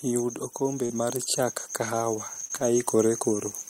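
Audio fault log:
0.58–1.35 s and 1.91–3.55 s, automatic gain rising. The level climbs smoothly by about 4 dB in each span. The voice and the background noise get louder together. That shows the gain control judged the input too quiet and raised its gain bit by bit. The first rise takes under a second. The second is slower and stretches over more than a second and a half.
0.85–0.92 s and 2.48–2.51 s, short concealed packet loss. About 40 ms goes missing in the first gap and about 20 ms in the second. The receiver fills each hole by carrying the last sound forward, following its pitch or using shaped noise. It then blends back into the real audio. The result is a brief smear or wobble, and a short consonant can drop out.
0.90–0.96 s, 2.36–2.46 s and 2.51–2.61 s, lost packet rebuilt from error correction. There is no gap here. The rebuilt stretches run about 40 ms, 60 ms and 60 ms, which fits two, three and three 20 ms packets. 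Each lost packet was replaced by a low-bitrate copy carried in the next one. Those copies sound rougher and noisier than the speech around them. The two later spans bracket the second concealed gap.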